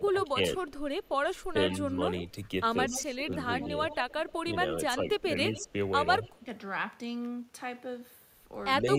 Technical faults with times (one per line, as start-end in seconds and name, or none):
0.00-6.44 speech suppressed in double talk
0.23-1.93 echo leak
2.90-6.39 echo leak
8.81-8.98 speech suppressed in double talk